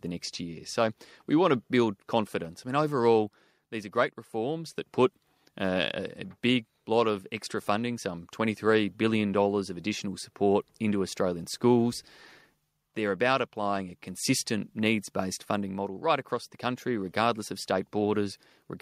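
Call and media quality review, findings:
No faults found in the speech audio.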